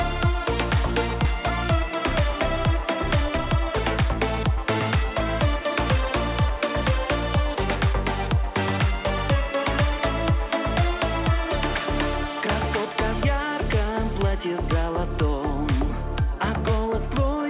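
A skip ahead at 1.25 s drops roughly half a second of audio. Playback jumps straight to the later material with no gap or fill, so the two sides butt together abruptly and the missing stretch simply vanishes, as when a receiver discards queued audio to cut delay.

Jitter buffer speed-up follows from 1.81 to 5.09 s and again from 6.09 to 7.68 s. The receiver, holding more audio than it wanted, trimmed short pitch-period pieces repeatedly: first at 106% speed, removing roughly a fifth of a second, then more gently at 103%, removing a few tens of milliseconds. Pitch stays put while the first run sounds slightly hurried, and the band-limited sound, with nothing above 4 kHz, points to a G.711 mu-law call path.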